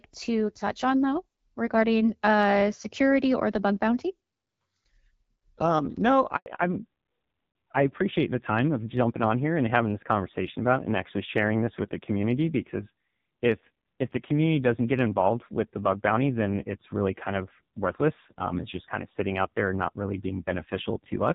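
Speech that starts as clear wideband audio, consistent with HD Voice at about 12.65 kbit/s, with light codec damage, suffers a handover gap from 6.36 to 6.46 s. For 100 ms no speech frames arrive while the call switches networks, so the sound falls silent rather than stuttering or repeating. That sets it apart from packet-loss concealment, which fills gaps with smeared, buzzy fill. From 6.46 s to the end, a fallback to narrowband cuts everything above 4 kHz, dulling the speech, and it turns rougher, which fits an older narrowband codec at a low rate of around 5.9 kbit/s. Because the cut is abrupt and persists, it is a network-side codec change, not a one-off glitch.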